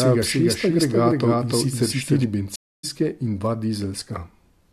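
A second capture path, likely a slower one feeding the same mix, produces a doubled audio track from the very start until 2.24 s. A full-band copy of the speech trails the original by about 0.3 s at roughly equal level, with no decay or room colour. Every syllable is heard twice, a clean, hard repeat rather than a reverberant tail, and the copy cuts off abruptly at 2.24 s.

At 2.56 s the connection drops and the player falls silent for 0.28 s. It then reconnects and starts a fresh decoder mid-stream. This stream reconnect resumes the speech at 2.85 s from a point about a fifth of a second further on than where it broke off, so a short stretch of material is skipped. The first decoded frame after the gap comes in muted or fading up, softening the restart.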